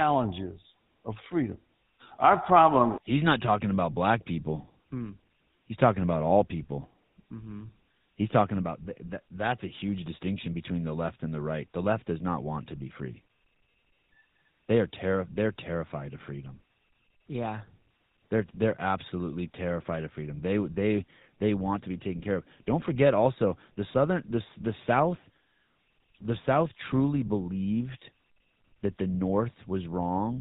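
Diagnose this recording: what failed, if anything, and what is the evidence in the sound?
GSM full-rate codec damage runs throughout the speech: a buzzy, gravelly roughness and nothing above 4 kHz, consistent with 13 kbps pulse-excited vocal-tract coding at the codec stage.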